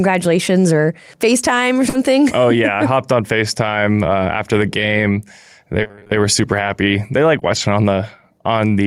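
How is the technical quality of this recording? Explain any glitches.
The recording has network transmission glitches in three places, all typical of a call carried over a lossy connection.

At 1.89 to 1.95 s, just before "oh yeah I", there is short concealed packet loss. About 40 ms of audio never reached the decoder in time, so the receiver extended the preceding sound to cover the hole. You hear a brief smear where the real signal drops out, and a small piece of the sound is missing.

The last 20 ms of that same moment, 1.93 to 1.95 s, was a lost packet rebuilt from error correction. The following packet carried a low-bitrate backup copy, and the decoder played that copy instead of leaving a gap. It carries the sound back into the real audio with a rough, grainy texture rather than silence.

At 3.65 to 3.75 s, right after "hopped on", the same recovery happens over about 60 ms, which fits three 20 ms packets. 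No audio is missing here. Instead there is a short stretch that sounds coarser and noisier, because the backup copies hold less detail than the original stream.

From 5.83 to 7.57 s there is repeated packet loss, which gives a robotic sound. Packets kept arriving late or not at all, leaving eight separate holes of up to 20 ms each. Together they total 160 ms, about 9% of that stretch. Each hole was patched by continuing the last sound, and roughly 70 ms more came from low-quality backup copies. Because the patches come in quick succession, the passage sounds choppy, with fragments dropping in and out.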